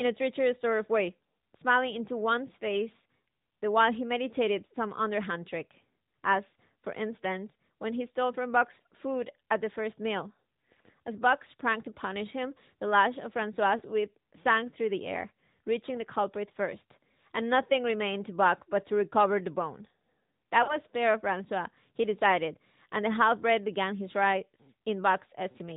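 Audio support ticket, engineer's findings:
AMR narrowband mobile codec, whole call: nothing above 4 kHz, plainly buzzy, synthetic speech. Sounds like a mid-rate mode, around 10 kbps; heavy vocal-tract-model coding on the radio leg.

Lost AMR speech frames, 13.78–13.82 s and 20.64–20.79 s: brief warble, then a longer smeared fade. Decoder concealing with reused pitch and falling gain, roughly one frame then two dropped.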